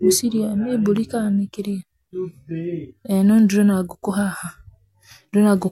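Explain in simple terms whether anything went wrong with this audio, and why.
Nothing went wrong here: the speech comes through steadily with no dropouts, clicks, glitches or other faults to point to anywhere in it.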